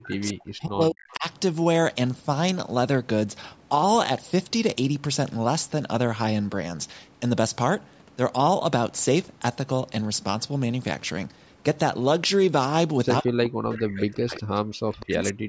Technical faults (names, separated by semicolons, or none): speech suppressed in double talk; echo leak